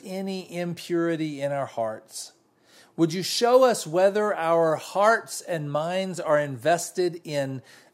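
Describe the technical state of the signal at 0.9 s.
At 0.9 s the signal is intact, with no audible fault at that point in the speech.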